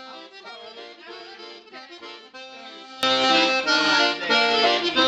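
One stereo channel likely has its polarity flipped from 0.0 to 3.03 s, so the material shared by both channels cancels when they are summed. The audio drops by about 21 dB, leaving a faint residue built only from the channels' differences.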